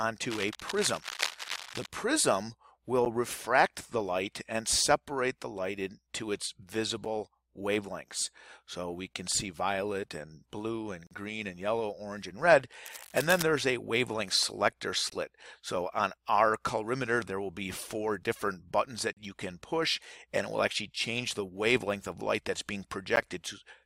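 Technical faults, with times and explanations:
0.30–1.88 s and 12.86–13.43 s, cable scratch noise: dense, irregular bursts of crackling and rustling sit over the sound, at a level of roughly 10 dB below it, for about 1.6 s and then about 0.6 s. The texture points to a worn cable, connector or control likely being moved, so its contact resistance jumps about rapidly and injects uneven noise on top of the signal rather than replacing it.
3.05 s, 11.07–11.11 s, 15.10–15.12 s, 19.13–19.17 s and 23.16 s, gap between stream segments: short hard-edged dropouts to silence, lasting about 10, 42, 20, 40 and 14 ms. They fall close to a 4 s spacing, which fits segment boundaries in a streamed file where the time stamps leave a small hole that the player pads with silence. The abrupt edges make each one read as a brief cut. The audio on either side is intact.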